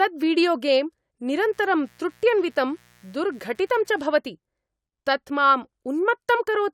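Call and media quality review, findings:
Mains buzz, 1.33 s to 4.13 s. Steady raspy buzz under the speech, around 35 dB below it. Probable component: dimmer, rectifier or unshielded cable. Switching spikes twice per 60 Hz cycle inject a 120 Hz pulse train. Its harmonics extend to several kHz.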